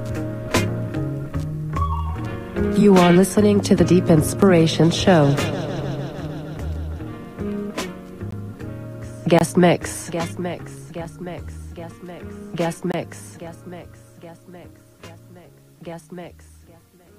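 Blocks of digital silence drop out at 4.42, 8.31, 9.39 to 9.41, 11.05 and 12.92 to 12.94 s. The output buffer likely went unfilled, so samples became zeros. Gaps of 5.8 ms, fitting a 256-sample buffer, sound as ticks. The 17.4 ms gap and the 23 ms gaps, which fit 1024 samples, sound as pops or short holes.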